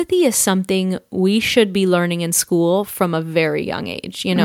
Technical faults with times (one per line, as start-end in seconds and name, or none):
none